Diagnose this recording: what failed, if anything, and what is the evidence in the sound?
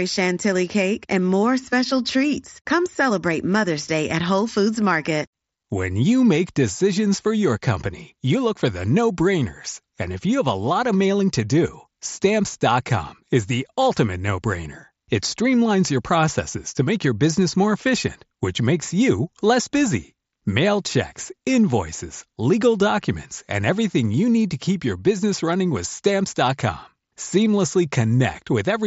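Nothing has failed here: the speech comes through a Bluetooth mSBC headset link, so it stops at about 8 kHz and carries a faint grain on the louder syllables, which is simply how that wideband headset codec sounds.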